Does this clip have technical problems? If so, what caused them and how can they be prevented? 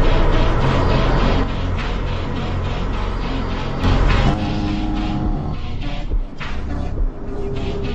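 Yes. The level drops by about 6 dB from 1.44 to 3.84 s and again from 4.34 s to the end, likely because one channel drops out before the mono sum. Securing stereo cables and connectors and checking both channels before summing would prevent it.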